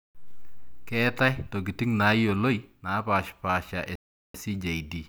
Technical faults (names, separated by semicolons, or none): Bluetooth stall